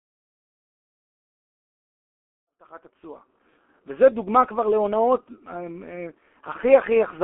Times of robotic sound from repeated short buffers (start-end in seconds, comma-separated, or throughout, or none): none